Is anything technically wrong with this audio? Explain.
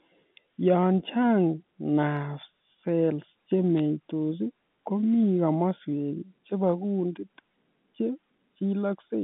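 Yes. At 3.79 s there are bit errors on a digital phone line. Flipped bits corrupt single samples, giving a brief sharp tick. Unlike packet loss, the sound never drops out.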